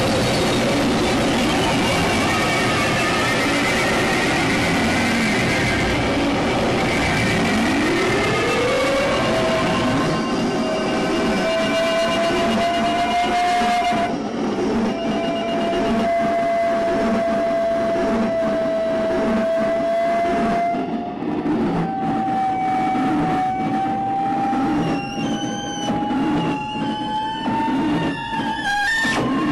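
At 8.13 s and 20.74 s, compressed frames skipped: the audio jumps ahead roughly 50 ms, then 70 ms, fitting whole 23.2 ms frames.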